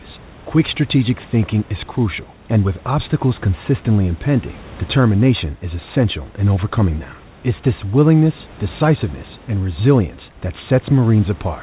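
No faults are audible: the room noise sits about 24 dB below the speech, and nothing reaches above 4 kHz, which fits a narrowband call path such as G.711 mu-law at 64 kbps.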